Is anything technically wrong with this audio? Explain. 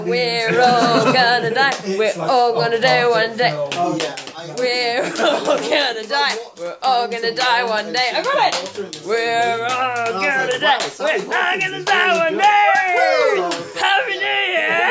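No, nothing technically wrong is audible in this recording.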